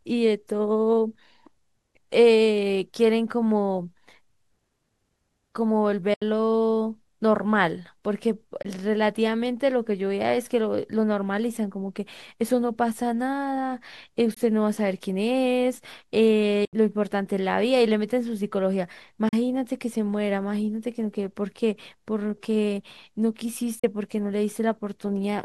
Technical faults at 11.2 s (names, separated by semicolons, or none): none